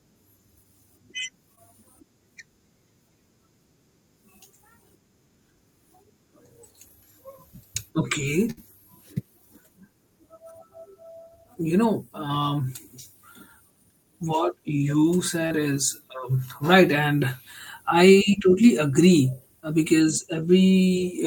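At 1.55 s, short concealed packet loss: about 20 ms never arrived, and the decoder extended the preceding sound, leaving a brief smear before real audio resumes. At 8.51 s, a burst of packet loss removed about 60 ms; the receiver held and faded the last sound, producing a short buzz or hiss before skipping ahead. At 15.47 s, between "what you" and "is um right", another short concealed loss of about 40 ms was filled, causing a brief smear or wobble.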